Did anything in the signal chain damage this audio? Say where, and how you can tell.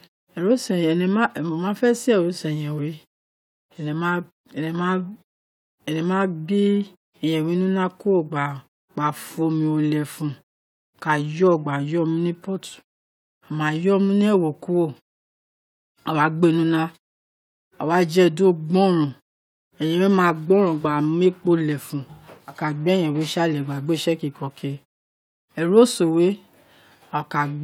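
No, nothing in this speech recording stood out on listening as damage from any stage of the signal chain.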